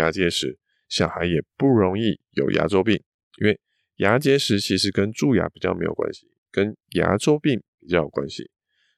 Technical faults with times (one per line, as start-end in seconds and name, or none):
none